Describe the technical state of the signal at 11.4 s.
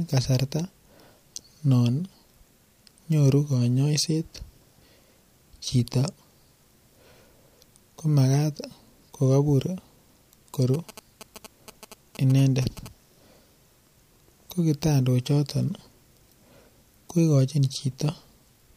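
At 11.4 s the speech carries GSM signalling bursts, running from 10.74 to 12.88 s. A nearby 2G phone's radio bursts are rectified by the audio circuit into a galloping dit-dit-dit of short 217 Hz buzzes, roughly 20 dB below the speech. Spectrograms show clustered harmonic stripes at 217 Hz multiples; waveforms show spiky pulse groups.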